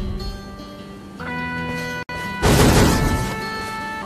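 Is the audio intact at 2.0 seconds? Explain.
No. Separately encoded pieces were joined here without trimming the encoder's start delay or final-frame padding. The result is a gap at a join of encoded pieces: a 63 ms gap from 2.03 to 2.09 s, with smeared edges, before the sound resumes where it stopped.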